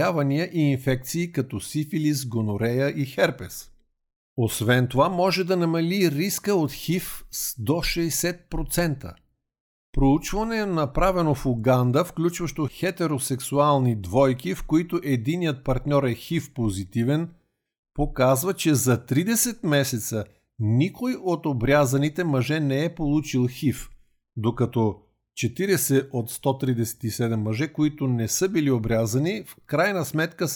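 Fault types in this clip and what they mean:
No fault types are present in this clip.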